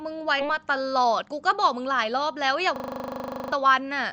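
At 0.39 s a skip ahead drops roughly four tenths of a second of speech. The two sides join almost directly with no filler, unlike a dropout that leaves silence or noise. From 0.97 to 1.30 s a jitter buffer speed-up trims short pitch-period pieces, about 50 ms in total, so the speech runs 13% faster at unchanged pitch. That distinguishes it from resampling, which would raise the pitch. From 2.76 to 3.52 s a system hang loop repeats one 40 ms piece, producing a steady 25 Hz buzz in place of roughly seven tenths of a second of speech. The exact repetition separates it from packet-loss concealment, which fades and varies.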